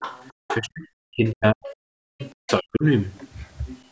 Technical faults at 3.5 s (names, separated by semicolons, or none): none